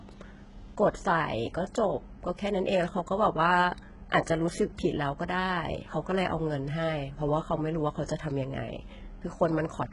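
HE-AAC compression, throughout the speech: nothing reaches above 11.1 kHz, and the treble sounds synthetic, with gritty, lispy s sounds. This is likely spectral band replication, where copied lower bands stand in for the real highs, and the heavy damage fits a bitrate near 12 kbps.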